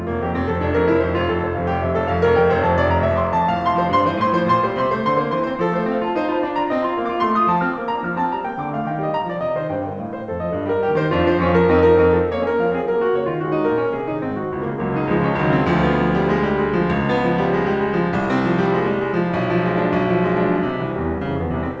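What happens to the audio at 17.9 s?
Nothing goes wrong at 17.9 s: the music carries straight through that moment, with only the steady band-limiting of the call path, which leaves nothing above 8 kHz.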